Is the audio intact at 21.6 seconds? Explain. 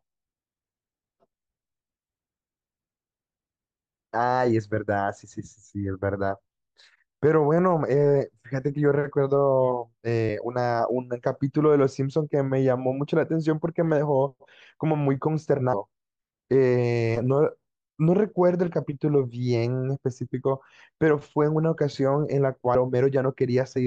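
Yes, at 21.6 seconds the speech plays through cleanly, with no dropout, click, distortion or other break in the audio at that moment.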